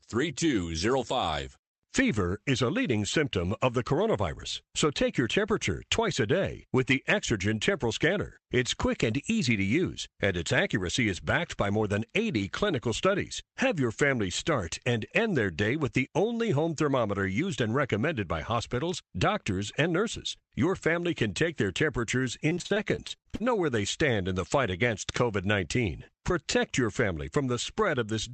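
From 22.49 to 23.52 s, after "can take their temperatures", repeated packet loss punches a dozen short holes, up to 43 ms, that get patched over. The speech goes choppy, with pieces missing.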